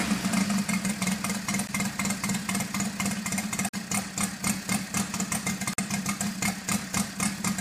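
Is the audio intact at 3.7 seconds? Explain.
No. From 3.69 to 3.74 s there is a gap between stream segments: a hole of silence about 47.5 ms long, with hard edges, cutting into the sound. The timestamps of two adjacent segments fail to line up, leaving a short span that no segment covers, and the player fills it with silence. Its position fits a boundary between 2-second segments. The rest of the sound plays in full on either side of the gap.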